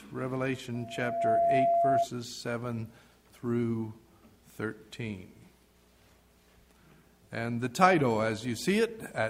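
At 0.74 s a loudspeaker feedback squeal starts. A single tone near 682 Hz swells over about half a second and ends up roughly 5 dB above the sound. It stops at 2.09 s. The microphone hears its own loudspeaker, and at that frequency the loop gain passes one.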